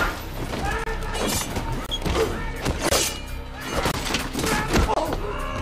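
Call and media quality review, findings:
Gap between chunks: silence inserted at each join of 1 s chunks. Result is 25 ms hard-edged holes at 0.84, 1.86, 2.89, 3.91 and 4.94 s, repeating every 1.03 s.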